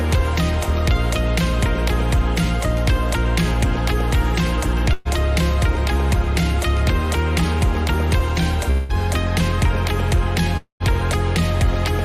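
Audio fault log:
4.93–5.08 s, burst of packet loss: about 120 ms of audio is missing, and the receiver fills the gap by stretching and fading the last sound. On a spectrogram this shows as smeared, repeated harmonics that dim before the real signal resumes further on.
8.71–8.92 s and 10.57–10.83 s, long network dropout: the sound turns into a held, decaying buzz or hiss, and the skipped audio (about 180 ms, then about 240 ms) never returns. This is likely a network outage. The waveform shows a shrinking envelope, and the second gap ends in about 110 ms of flat silence.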